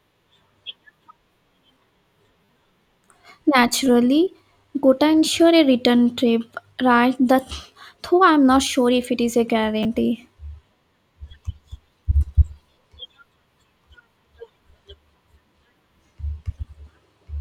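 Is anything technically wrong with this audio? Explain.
Yes, there are repeated buffers at 2.45 to 2.49 s and 9.83 to 9.85 s, just after "if it is a". Fresh audio arrived late, so the last block, consistent with a 10 ms buffer, was replayed four and then two extra times. The speech briefly buzzes and skips roughly 40 ms and 20 ms.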